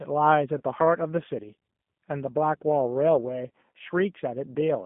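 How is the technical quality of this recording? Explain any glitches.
Quality is limited: the whole thing sounds like a narrowband phone call with audible codec damage, and there are two short dropouts that got patched over.

Throughout, it's the G.729 codec. The band runs only from about 150 Hz to 3.5 kHz, which fits an 8 kbit/s call. The speech is rebuilt from a vocal-tract filter plus a handful of pulses per frame, so it comes out rough, slightly synthetic and muffled.

At 0.58 to 0.62 s and again at 3.48 to 3.50 s, there's VoIP packet loss concealed by the speech codec. Each time, roughly 20 ms of audio went missing, and the decoder filled the hole by extrapolating its last pitch and filter settings. You hear the sound briefly stretched into a fading buzzy tone or coloured noise, and the voice stays a bit off for a moment afterwards.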